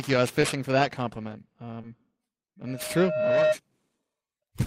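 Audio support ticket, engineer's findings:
Periodic clock jitter, throughout: rough, metallic edge on speech, gone in pauses, unlike a steady noise floor. The converter clock is modulated by interference around 2 kHz, adding sidebands at that spacing.

Short concealed packet loss, 0.41–0.45 s (between "you I was" and "for that compliment") and 1.81–1.85 s (after "for that compliment"): brief smears where the decoder extended the previous sound over roughly 20 ms gaps. Unlike dropouts, there is no silence.

Loudspeaker feedback squeal, 2.67–3.57 s: a single 618 Hz tone swells over roughly 0.7 s to around 5 dB above the speech. The mic-to-speaker loop gain exceeds one at that frequency. Unlike a hum, it builds up rather than holding steady.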